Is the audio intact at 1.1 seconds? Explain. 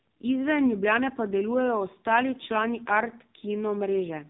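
No, the AMR narrowband mobile codec runs throughout: nothing above 3.8 kHz, and a buzzy, synthetic voice consistent with roughly 5.9 kbps, unlike a plain low-pass filter.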